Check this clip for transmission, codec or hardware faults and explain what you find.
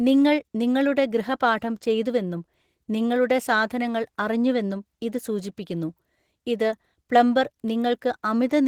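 One codec fault runs through the whole speech clip: Opus voice compression. The damage is plainly audible, and the level points to roughly 16 kbps in hybrid mode. SILK's coarse linear-prediction excitation leaves speech hoarse and slightly robotic, while a thin CELT layer keeps content above 8 kHz. That grainy texture alongside fullband, rather than a clean low-pass muffle, separates it from simple band-limiting.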